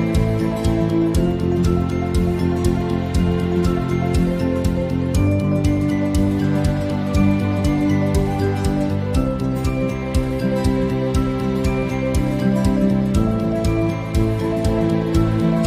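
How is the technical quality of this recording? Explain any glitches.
The technical quality of the recording is sound, with no glitches to explain.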